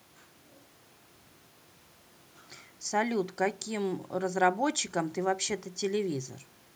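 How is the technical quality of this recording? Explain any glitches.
No glitches detected.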